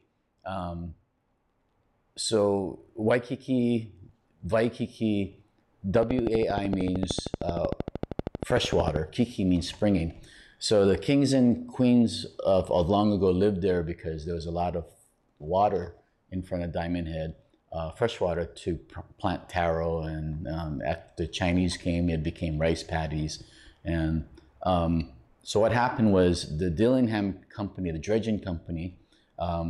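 Something likely injecting a pulse into the signal path, such as interference from nearby equipment, causes a train of clicks from 5.95 to 8.97 s: around forty evenly spaced clicks at 13 per second, about 15 dB above the surrounding sound, heard as steady ticking.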